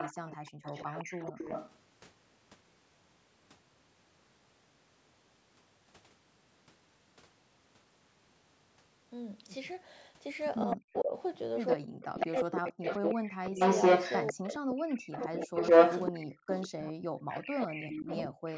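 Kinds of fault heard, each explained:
Echo leak: The far end's echo canceller likely let part of its loudspeaker pickup return down the line. A copy of the speech trails about 161 ms behind, roughly 10 dB under it at the start, then louder than the speech itself from 10.62 s onward.
Speech suppressed in double talk: With both sides active, the echo control most likely could not tell local speech from returned echo and clamped down on both. Between 10.66 and 18.46 s the speech drops out in pieces, falling by as much as about 40 dB, for about four seconds altogether.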